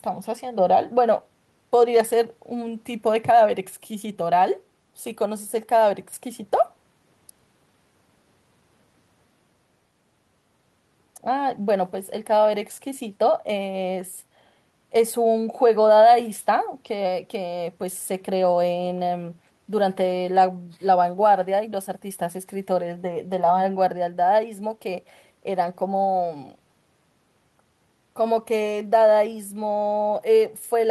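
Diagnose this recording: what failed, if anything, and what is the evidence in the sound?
Nothing failed here as far as I can hear: the speech comes through steady and intact at every stage from capture to playback, with nothing in the sound to trace back to a fault.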